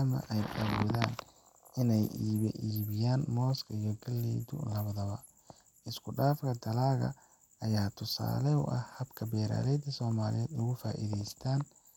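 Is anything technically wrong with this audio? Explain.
Yes, two stretches of Bluetooth SBC bit pool drop, 1.97 to 5.89 s and 8.47 to 11.63 s (right after "dalaggan ayaa"). The speech loses its treble and picks up a gritty grain, which fits the link falling from bit pool 31 to 14, about 99 kbps, starving the top sub-bands.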